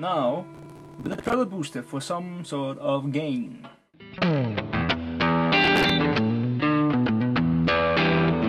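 You get two bursts of processor overload crackle, from 0.55 to 1.34 s and again from 5.64 to 5.90 s. The system couldn't fill its audio buffers in time, so each missed deadline replayed a stale chunk with hard edges. The grit comes in steps of around 10 ms, which fits a buffer about that size. The first burst sounds like a few dozen misses in a row and the second like roughly ten, and both clear up once the load drops.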